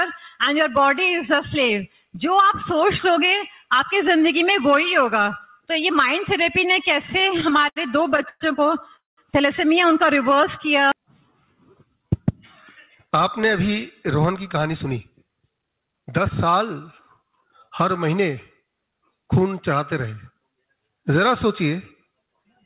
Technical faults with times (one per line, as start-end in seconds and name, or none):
7.02-8.42 repeated stalls (stutter)
8.96-9.19 call audio freeze
10.30-11.07 jitter buffer slow-down
11.85-12.09 jitter buffer slow-down
14.18-16.46 jitter buffer speed-up
17.22-18.05 jitter buffer speed-up
20.06-20.41 jitter buffer speed-up